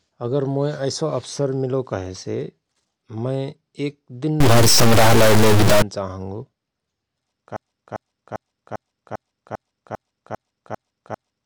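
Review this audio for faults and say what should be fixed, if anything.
Just after "मय एक दिन", from 4.40 to 5.82 s, the speech becomes distorted, and the gaps between sounds fill with steady noise instead of silence. This is a stuck bit, likely a data line or converter bit held fixed, so about half the samples are offset by that bit's weight. Unlike clipping, the distortion doesn't depend on loudness, and the noise persists through pauses. Checking converter wiring and running a bit-pattern test on the data path would prevent it.

From 7.56 s to the end, the same 0.40 s fragment repeats back to back about ten times, and the speech that should have followed is lost. This broken-record loop likely comes from a stalled player, encoder or stream resending its last buffer. It differs from an echo or stutter because the copies are exact, unfaded and continuous. A stall watchdog that outputs silence or restarts the stream would prevent it.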